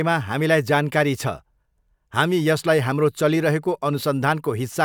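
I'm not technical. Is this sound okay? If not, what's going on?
Yes, no faults heard.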